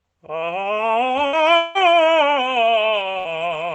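This music clip, carried over a call codec whose top end stops around 8 kHz, suffers two bursts of packet loss at 1.27–1.36 s and 3.19–3.28 s. Consecutive packets failed to arrive, so the receiver stretched the last sound into a brief fading smear, and the music resumes about 60 ms further on. From 1.57 to 1.78 s a longer fault follows, likely a long network dropout. The last sound is held and fades for the full stretch without ever reaching silence, and the music returns having skipped roughly 180 ms.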